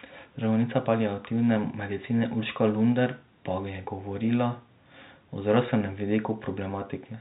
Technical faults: none

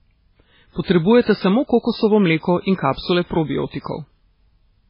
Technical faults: MP3 compression

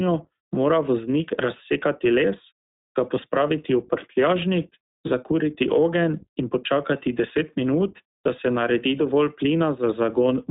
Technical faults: iLBC codec

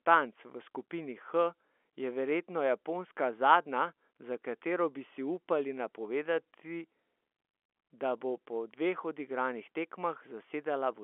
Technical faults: none

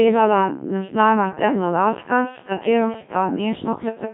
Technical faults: Codec 2 vocoder

